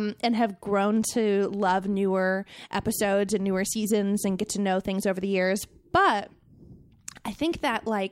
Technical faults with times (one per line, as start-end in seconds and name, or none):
none